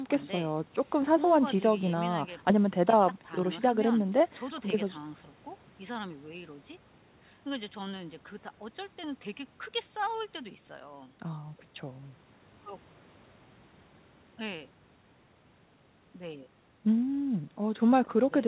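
No faults are audible in this speech; the band stops at about 4 kHz, which fits the narrowband G.711 mu-law telephone codec of the call path at 64 kbps, and the call microphone processing trims only the lowest bass.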